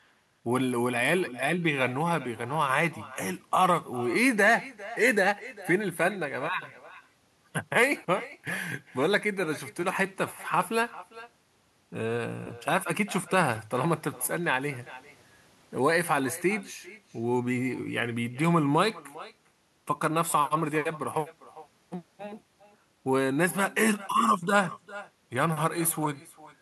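From start to finish, the far end is playing the call through a loudspeaker with no echo canceller in the path, so its microphone picks up that playback and sends it straight back. The result is echo with no canceller: every phrase of the speech returns a little under half a second later as a second copy, about 18 dB quieter than the original and sounding thinner, trailing each utterance like a faint shadow.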